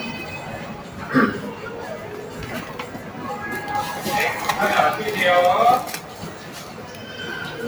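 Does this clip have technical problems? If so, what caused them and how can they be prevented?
Yes. A noise suppressor meant for speech stays on across the whole clip. It treats steady tones, ambience and tails as noise. Onsets pass, but sustained sound sinks by about 10 dB, so the level pumps and thins. Prevention: disable speech noise suppression when capturing music or ambient sound.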